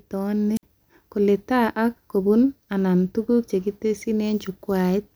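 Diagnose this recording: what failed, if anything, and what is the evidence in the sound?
The failure is in the radio link ahead of the analogue input: a wireless microphone squelch dropout. At 0.56 s the FM signal from the transmitter faded far enough that the receiver's squelch closed and muted its output. The speech gives way to a short burst of hiss, then a hole of near silence lasting about 58 ms, before the signal recovers and the speech returns by 0.63 s. The brief static before the gap marks the weakening carrier.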